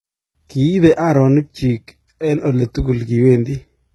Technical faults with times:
0.00-3.94 HE-AAC compression

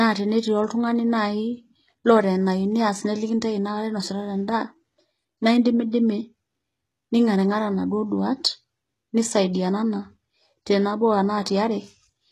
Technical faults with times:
0.00-12.32 HE-AAC compression

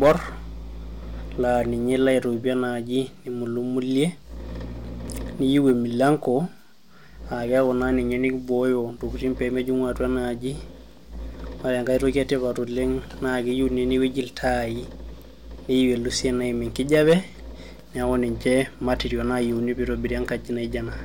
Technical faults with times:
0.02-0.12 hard clipping
5.08 chunks out of order
5.56-6.10 hard clipping
16.93-17.13 hard clipping

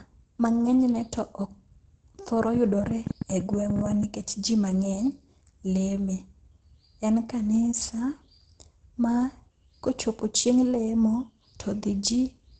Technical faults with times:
0.00-12.60 Opus compression
2.55-4.04 train of clicks

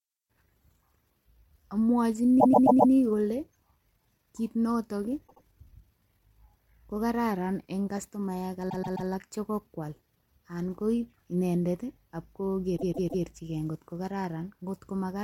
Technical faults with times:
2.39-2.91 repeated frames
5.27-5.42 repeated frames
8.69-9.08 repeated frames
12.76-13.23 repeated frames

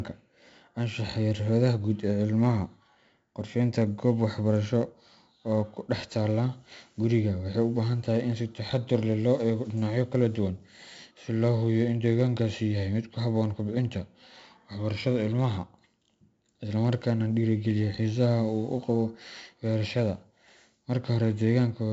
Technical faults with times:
0.00-21.93 4-bit ADPCM compression

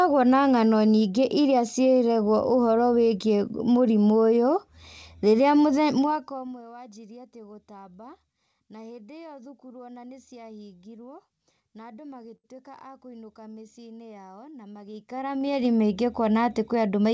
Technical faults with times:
5.95-6.62 zipper noise
12.36-12.47 short stall from a late packet
14.79-15.67 zipper noise

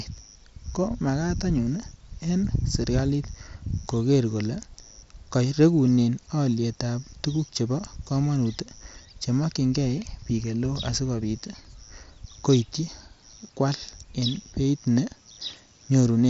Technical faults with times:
none

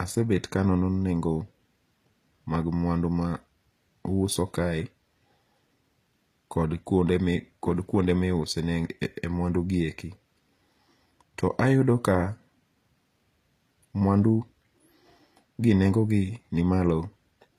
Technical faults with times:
0.00-17.58 HE-AAC compression

